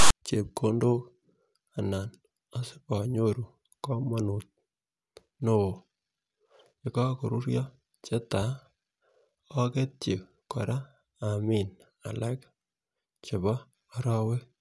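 A speech recording that opens with a short burst of harsh static from 0.0 to 0.10 s, a case of file tags played as audio. At the head of the file, a block of text metadata has been decoded as if it were sample data. The character bytes produce a loud, rasping noise pushed off-centre to one side rather than centred on zero, and the burst starts and stops with hard edges before the speech begins.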